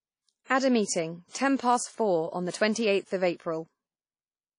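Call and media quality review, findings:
Washy, ringing speech throughout, with hiss that breathes with the signal. Spectrogram shows a hard ceiling at 10.1 kHz and patchy, gappy upper bands. Likely WMA compression at a low bitrate, consistent with about 32 kbps. Long transform blocks smear quantisation noise, and weak lines are zeroed.

Pre-echo at 0.44–0.50 s: a short hiss leads a sharp attack, and the onset sounds smeared. Waveform shows a raised noise floor for 56 ms before the transient. Spectrogram shows broadband haze ahead of it. Block-wide quantisation noise from the transform codec fills the quiet lead-in.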